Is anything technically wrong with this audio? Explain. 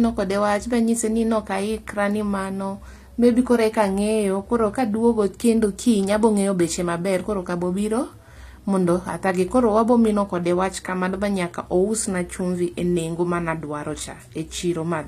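Yes. Throughout the speech the s sounds turn gritty and lispy, and nothing is present above 14.9 kHz. This is likely HE-AAC compression at a low bitrate, around 24 kbps: the codec keeps the lower spectrum and synthesises the treble by copying lower bands upward, so the top sounds bright yet misaligned. A plain low-pass would dull the top end rather than roughen it.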